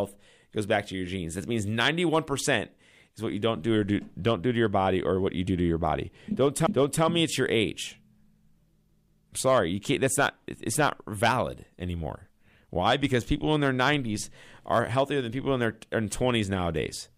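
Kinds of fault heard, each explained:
Repeated frames: a short run of compressed frames plays twice, so about 0.37 s of speech stutters back just before "me it's your age".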